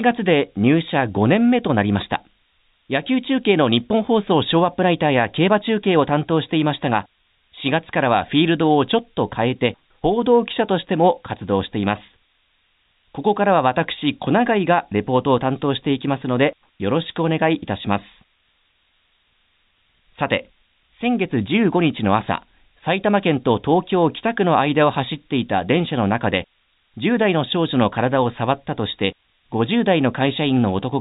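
A switching power supply whistle runs throughout: the supply's oscillation leaks into the audio as a high whistle near 7 kHz, drifting between about 6.6 and 8.2 kHz, roughly 25 dB below the speech. From 12.06 to 12.08 s, packet loss with pitch repetition replaces a 20 ms gap, which fits a single lost packet, with a repeated pitch period, heard as a brief held, buzzy moment.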